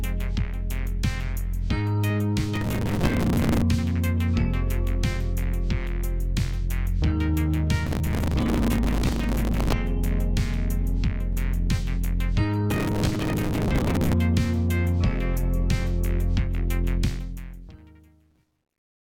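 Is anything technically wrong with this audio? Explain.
Yes. Gritty bursts of crackle and tearing ride on the sound at 2.56–3.62 s, 7.86–9.73 s, 12.71–14.13 s and 18.31–18.82 s. This is processor overload crackle: buffers of around 5 ms miss their deadlines and replay stale audio with hard edges. The fade-out from about 17 s turns grainy from 17.04 s to the end and is at its worst from 17.89 s. This is truncation distortion on a fade: the gain stage keeps only 11 bits without dither, so the quiet tail collapses into coarse steps.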